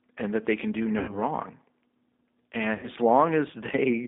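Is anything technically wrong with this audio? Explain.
Yes. Throughout the speech there is G.729 codec damage. The band runs from about 250 Hz to 3.7 kHz, which fits an 8 kbit/s G.729A stream. Rebuilding each 10 ms frame from a filter, a pitch predictor and a few pulses leaves it plainly rough and synthetic.

There are two dropouts handled by VoIP packet loss concealment, at 0.99–1.18 s and 2.74–2.89 s. Each covers about 90 ms of missing audio, consistent with three lost packets. The decoder extends its last pitch and filter at falling gain, giving a buzzy or noisy, fading stretch that stays weak as it recovers.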